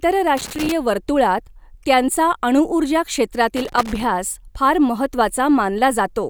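A worn or dirty contact somewhere in the signal path is making and breaking as it shifts, giving loose connector crackle twice in this speech. Each time the contact opens and closes, the audio is chopped into fragments, and any DC sitting on the line turns those interruptions into pops. The first burst runs from 0.37 to 0.72 s, the second from 3.57 to 4.04 s, both heard as irregular scratchy crackling over the speech.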